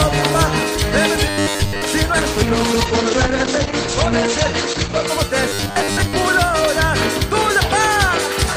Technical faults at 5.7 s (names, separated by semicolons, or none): robotic sound from repeated short buffers